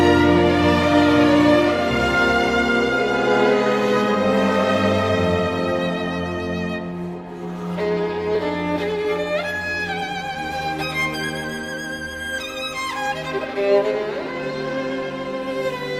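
At 8.35 s there is an overlap between stream segments. Two 2-second segments claim the same time, so about 10 ms of real sound is cut. The waveform jumps, heard as a tiny skip.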